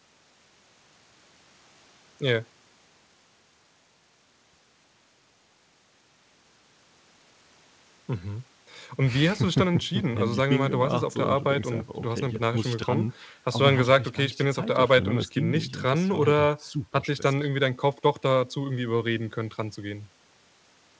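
No technical faults are audible.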